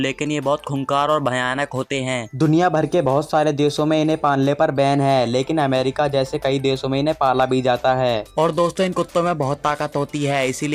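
From 8.16 s to the end, periodic clock jitter at about 1.5 kHz spreads sidebands around every component, giving a rough, metallic edge strongest on high content.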